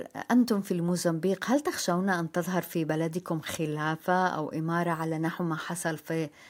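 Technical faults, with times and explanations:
No technical faults can be heard in this speech recording. There is nothing to place at any time in the audio.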